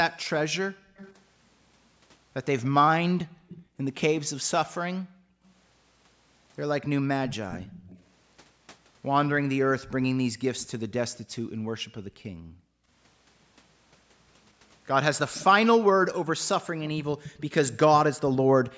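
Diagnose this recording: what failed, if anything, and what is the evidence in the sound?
Background gated by the echo canceller, at the call-processing stage: the room tone drops by about 40 dB at 0.7–0.96 s, 3.26–6.93 s, 10.29–12.9 s and 18.44–18.55 s. Each episode lasts from about a tenth of a second to roughly a second and a half in total, and the background snaps back once the suppressor releases. On a waveform the noise floor pinches to a near-flat line. A spectrogram shows the faint broadband haze going dark across every band at once.

Echo leak, also in call processing: a faint second copy of the speech trails the direct sound by 227 ms during 0.96–4.01 s, 7.29–8.03 s, 10.59–10.92 s and 15.34–17.77 s, sitting about 15 to 25 dB below it. The likely cause is a far end on loudspeaker whose echo canceller did not fully subtract what its microphone picked up. A spectrogram shows harmonic stripes repeated, weaker, about 0.23 s later. 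The waveform shows small shadow envelopes after speech bursts in places.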